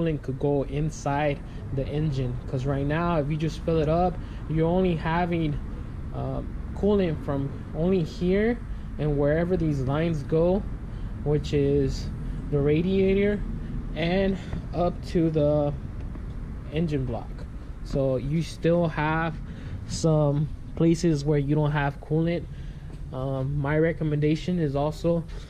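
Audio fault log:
Nothing to log here, since no faults turn up anywhere in this clip.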